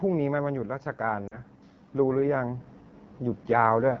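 The whole clip runs through the AMR wideband (HD Voice) codec, and the speech has that rough, raspy edge that points to one of its lowest modes, around 8.85 kbit/s. From 0.05 to 0.9 s, automatic gain falling pulls the level down by about 4 dB, so the speech and its background sink together. Then from 0.97 to 2.72 s automatic gain rising swells everything back up by about 6 dB, slowly rather than in a jump. Inside that rise, from 1.27 to 1.39 s, there are lost AMR speech frames. The decoder stretches the last good sound and fades it for about 40 ms, which fits two dropped 20 ms frames, and the speech comes back briefly weak.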